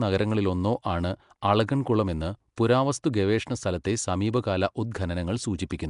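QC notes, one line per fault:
Throughout: Nellymoser compression, likely. The speech has a rough, hissy halo and a smeared, underwater tone. Fixed low bit allocation starves weak bands, which are filled with noise instead. Nothing reaches above 10.6 kHz, and the damage fits a rate around 44 kbps.
1.41 s, 2.56 s, 3.84 s: pre-echo. A hiss of 10 to 12 ms comes just before each attack, the first right after "നഗരങ്ങളിലൊന്നോ ആണ്" and the second after "അളഗൻകുളം എന്ന്". The codec spreads noise sized for the loud onset across its block, so the quiet moment before the onset fills with hiss and the attack sounds softened.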